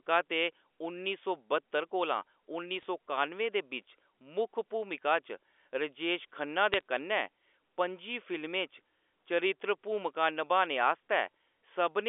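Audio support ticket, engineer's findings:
Bit errors on a digital phone line, 2.79–2.85 s and 6.74–6.81 s: bursts of sharp ticks and crackle over otherwise intact speech. Flipped bits in the G.711 stream; each corrupted sign or high-order bit throws one sample far off. Error rate a fraction of a percent.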